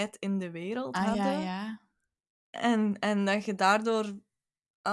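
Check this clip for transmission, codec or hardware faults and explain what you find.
No transmission, codec or hardware faults can be heard in this speech recording. Nothing in it calls for further explanation.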